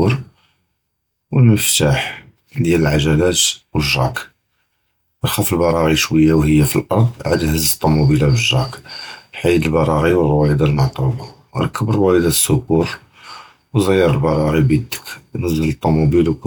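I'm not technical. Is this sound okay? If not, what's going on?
Yes, nothing stood out as a problem when listening to this speech recording.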